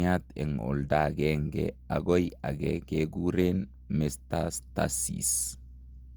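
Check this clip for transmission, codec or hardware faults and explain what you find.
One codec fault runs through the whole speech clip. Generation loss: the smeared, swirly, hollow tone likely comes from Opus-style encoding repeated around five times, at a rate pointing to 64 kbit/s. Each pass requantises on a shifted frame grid, so the noise compounds. A spectrogram shows a 20.1 kHz ceiling, and the waveform shows softened attacks.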